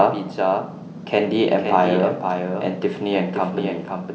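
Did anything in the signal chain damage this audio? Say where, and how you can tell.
Yes: a doubled audio track throughout, likely a second, slower capture path. A copy trails by about half a second, a few dB quieter, and shows as a shifted, fainter repeat on the waveform.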